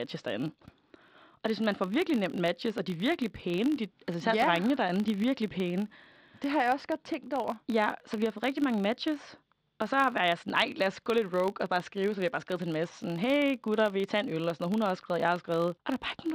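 A filter restarted on every block runs through the whole of this speech recording, heard as a 50 Hz buzz riding under the audio and rising and falling with its level. Each block starts the filter from silence, adding a small transient every 20 ms.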